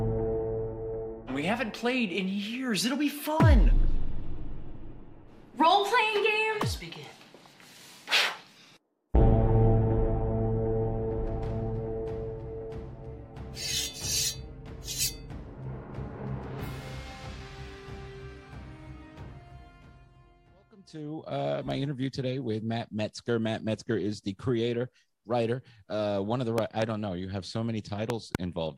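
Two sharp double pops jump out near the end of the audio, one from 26.58 to 26.84 s and a louder one from 28.10 to 28.37 s, with the sound continuing underneath. They peak roughly 15 dB and 20 dB above the signal. These loud pops are likely caused by a sudden voltage step or pulse, from a plug, a switch, static or a driver glitch, that entered the signal path and was briefly shaped by the circuits after it.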